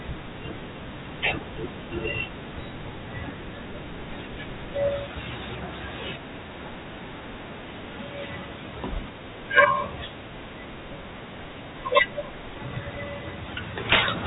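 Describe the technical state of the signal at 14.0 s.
Integer overflow runs from 13.90 to 14.08 s. The speech peaks are pushed about 17 dB past the top of the integer range. Instead of being held at the limit, those samples wrap around to the opposite extreme, so each overdriven peak jumps across the full scale. The result is a burst of harsh, violent cracking on the loud parts, far sharper than ordinary clipping. It sits on top of narrowband telephone-style audio that stops at 4 kHz.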